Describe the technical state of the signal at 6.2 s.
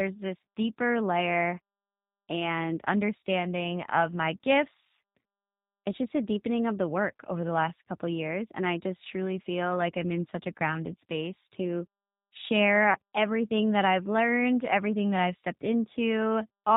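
At 6.2 s the speech carries G.729 codec damage, present across the whole clip rather than at this moment alone. The speech is rebuilt from a vocal tract filter, a pitch predictor and a few pulses per 5 ms subframe, which fits an 8 kbit/s G.729A stream, so it sounds plainly rough and synthetic. A spectrogram shows a hard ceiling at 4 kHz with nothing above it, and coarse harmonic texture below.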